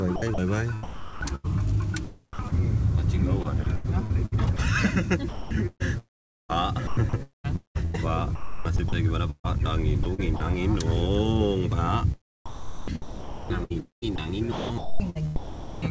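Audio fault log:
0.16–10.20 s, 5.29–7.46 s, 8.35–8.92 s, 10.03–10.40 s and 12.46–15.82 s, sound chopped by the voice detector: within each stretch the audio repeatedly cuts to steady synthetic noise and back. About 1.5 s, 1.1 s, 0.36 s, 0.06 s and 2.1 s of sound are replaced in these stretches. This is likely the sender's voice activity detection toggling transmission on and off, with the receiver filling each gap with comfort noise. The result is choppy, all below a band limit at 8 kHz that fits a G.722 call path.
3.64 s and 4.57 s, sound dropped by the voice detector: each is a 20 ms hole where the sound briefly gives way to flat noise and then resumes. This is likely the voice detector judging a quiet moment to be background and stopping transmission for one frame, with comfort noise played in its place.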